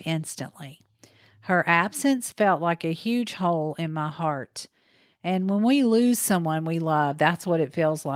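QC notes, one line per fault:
No faults found on this speech recording; nothing to log.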